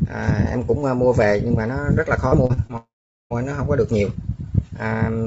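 From 2.28 to 2.71 s the stream suffers repeated packet loss (robotic sound): packets keep going missing or arriving late, and the receiver patches each hole by stretching out the last sound before the next one lands. There are four such holes here, the longest about 38 ms, so roughly 30 percent of this stretch is synthetic fill. The audio turns choppy, with small bites taken out of it, all within the 7 kHz ceiling of the G.722 call path.

Straight after, from 2.77 to 3.32 s, comes what is likely a long network dropout, with no audio getting through for just over half a second. At first the receiver keeps the last sound going as a brief fading buzz or hiss. Then about 0.42 s of near-silence follows before the audio returns, with the material from that gap simply gone.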